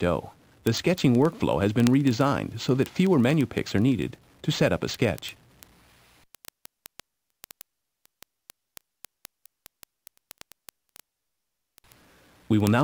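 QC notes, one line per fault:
0.13–12.81 s, word clock ticks: an unlocked receiving clock, roughly 700 ppm off the sender's, slips one sample about every 30 ms, giving hundreds of regular ticks.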